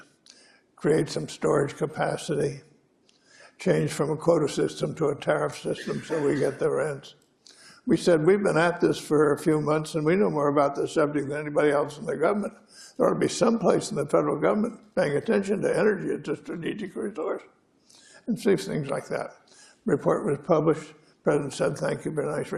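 No technical faults can be heard anywhere in this audio.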